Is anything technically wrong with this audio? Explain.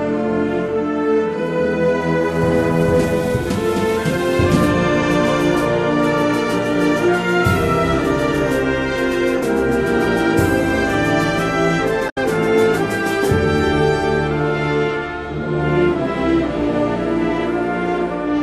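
Yes. From 12.06 to 12.18 s a brief glitch cuts through the sound. It comes from damaged data in the compressed stream: corrupted bytes there make the decoder misread those frames and lose sync until it finds the next valid frame header.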